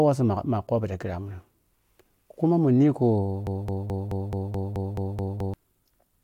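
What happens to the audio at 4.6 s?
At 4.6 s the speech is caught in a broken-record loop running from 3.47 to 5.54 s: a 215 ms fragment repeats exactly, ten times back to back. That is likely a stalled player or stream resending its last buffer. Unlike an echo, the repeats never decay, and the speech meant for that span is lost.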